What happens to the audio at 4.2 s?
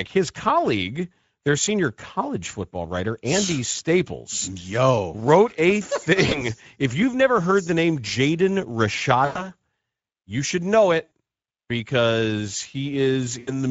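Nothing new starts there: the whole clip runs through the Speex codec, and 4.2 s just sits inside it. The excitation is getting too few bits, which fits a bitrate around 16.8 kbps, so the speech comes out noticeably noisy and hoarse.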